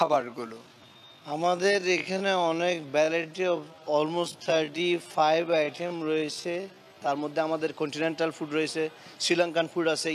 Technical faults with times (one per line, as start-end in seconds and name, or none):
0.00-7.10 time-stretched section